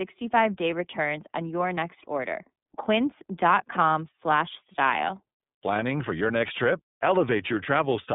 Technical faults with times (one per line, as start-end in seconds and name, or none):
0.00-8.14 iLBC codec